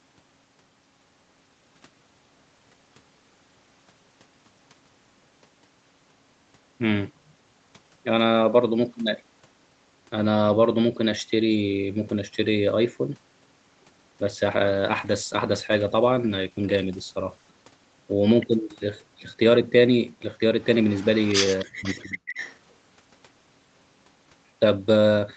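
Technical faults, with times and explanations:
14.66–17.57 s: call bitrate drop. The sound turns rough and watery, which fits the encoder being pushed from about 32 kbps down to about 12 kbps, coding far more coarsely. It stays at its worst for about 2.8 s before clarity returns.
20.62–21.65 s and 21.86–22.58 s: echo leak. A faint copy of the speech trails the original by about 0.28 s. It sits around 25 dB below the speech at first, then rises to roughly 15 dB below. The likely cause is a loudspeaker whose echo canceller let part of the returned audio through.
21.64–22.18 s: speech suppressed in double talk. The speech drops sharply, by roughly 40 dB at its deepest, in pieces totalling about half a second. The likely cause is an echo canceller that could not tell the talker from the overlapping echo and turned both down.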